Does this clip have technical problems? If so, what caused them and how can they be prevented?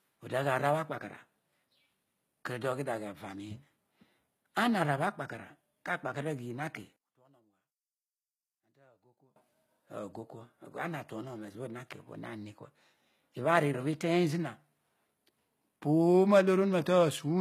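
Yes. Throughout, the treble sounds gritty and metallic with nothing above 14.9 kHz, likely HE-AAC compression rebuilding the highs by band replication, which fits a bitrate near 20 kbps. Encoding at a higher bitrate or with plain AAC prevents this.

From 6.96 to 9.36 s the sound nearly vanishes, dropping about 29 dB, likely one channel inverted cancelling the shared centre when summed to mono. Checking polarity on both channels before mixing down prevents this.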